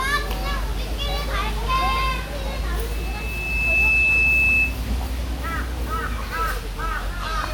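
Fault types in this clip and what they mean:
Generation loss: The whole clip sounds swirly, smeared and a bit hollow, with blurred attacks and nothing above 20.1 kHz. That's likely from being lossy-encoded and decoded over and over, something like ten passes at a setting that fits WMA at 128 kbit/s, with each pass adding fresh artefacts.
Loudspeaker feedback squeal: From 2.91 to 4.78 s a single 2.6 kHz tone swells up over roughly a second and sits about 5 dB above the rest of the sound. A mic is picking up its own speaker, and at that frequency the loop keeps reinforcing itself.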